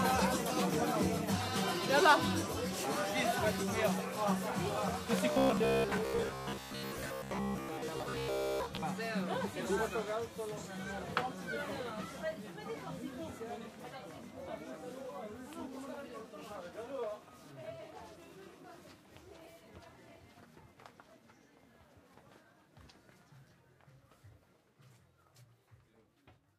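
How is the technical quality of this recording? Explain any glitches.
One glitch: robotic sound from repeated short buffers between 5.32 and 8.83 s. Short buffers, likely about 15 ms long, loop over most of the audio, imposing a rigid 66.7 Hz buzz; spectrograms show evenly spaced harmonic stripes, waveforms a repeating pattern.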